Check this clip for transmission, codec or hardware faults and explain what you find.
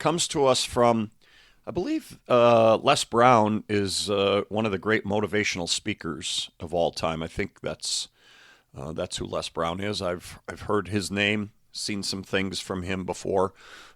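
One transmission fault is present in this speech clip: a corrupt frame decoded at 2.91 s. A single compressed frame arrived with flipped bits, and the decoder played it anyway. The misread gain values and spectral codes put energy in the wrong frequency bands for roughly one frame's duration. It is heard as a short chirp, squeak, blip or burst of noise, peaking around -10 dBFS, that then stops.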